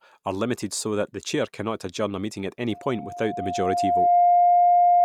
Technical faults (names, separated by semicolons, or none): loudspeaker feedback squeal